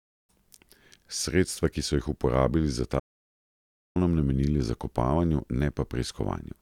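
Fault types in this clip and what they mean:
Audio dropout to silence: the speech cuts off abruptly at about 3.00 s and returns at about 3.96 s, leaving close to a second of complete silence in which even the room tone vanishes. That dead floor is what separates it from a natural pause or a noise gate closing, where some background or a gradual fade would remain. The likely cause is a brief loss of the input signal while recording continued.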